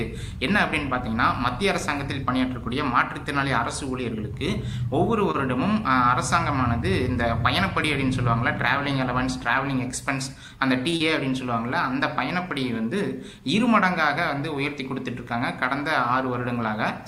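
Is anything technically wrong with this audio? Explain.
Yes, there are network-playout faults.

Short stalls from late packets occur at 5.31 to 5.37 s and 10.90 to 10.96 s. The jitter buffer ran dry, and the last sound was stretched by 26 ms and 23 ms, giving a held moment with a slight buzz or dip and nothing lost.

A jitter buffer speed-up runs from 10.27 to 10.49 s. The receiver trimmed about 40 ms of pitch-period pieces, so the audio plays at 113% speed with unchanged pitch and sounds hurried.

Short concealed packet loss follows at 10.97 to 11.03 s. 40 ms never arrived in time and was bridged by extrapolating the preceding sound, heard as a brief smear or wobble.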